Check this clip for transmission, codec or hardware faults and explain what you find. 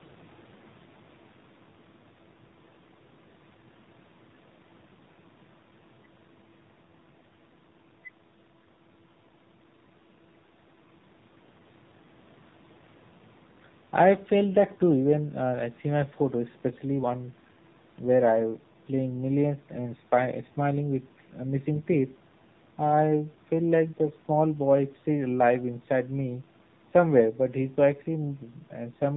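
One codec fault runs through the whole clip. The speech carries AMR narrowband mobile codec damage from start to end. Nothing above 4 kHz survives, so the voice sounds boxed in. The codec models the vocal tract with sparse pulses per 5 ms. Damage is plainly audible, buzzy and synthetic, which fits a low rate near 7.4 kbps.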